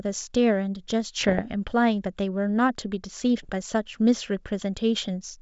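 Pops and rough, gritty bursts with brief jumps in level break into the speech from 1.21 to 1.46 s, and a shorter, harsher patch follows from 3.43 to 3.50 s. These are bit errors on an ADPCM link: each flipped bit throws off the decoder's step size and prediction, so the damage smears on for milliseconds. The second burst sounds denser, with under one bit in a hundred corrupted, against the clean G.722 wideband band.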